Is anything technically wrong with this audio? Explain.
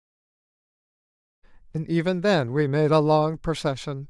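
No, nothing is technically wrong with this audio.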